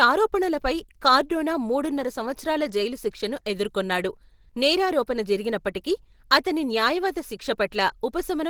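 Opus compression, throughout the speech: the sound is muffled, hoarse and grainy, with fine detail replaced by noise, fitting the likely cause of hybrid-mode encoding near 16 kbps.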